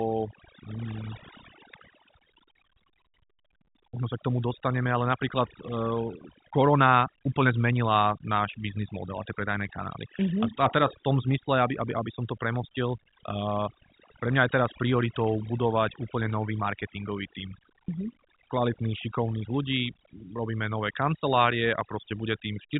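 Throughout the speech, overdone noise removal pulls bands near the noise estimate right down, leaving near-silent gaps with twinkling specks, unlike the steady 3.8 kHz telephone band limit.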